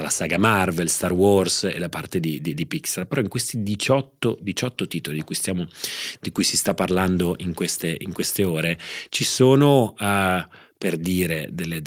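No technical faults are audible anywhere in the recording.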